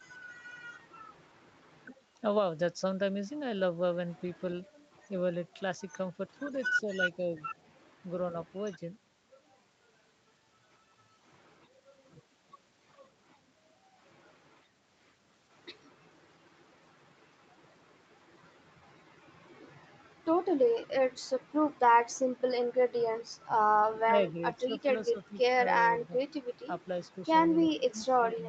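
Speech suppressed in double talk, likely from the echo canceller ducking both sides, appears at 6.82–7.35 s (a slight dip of about 5 dB), 24.06–25.67 s, 26.06–26.18 s and 27.53 s to the end, with drops of around 10–15 dB.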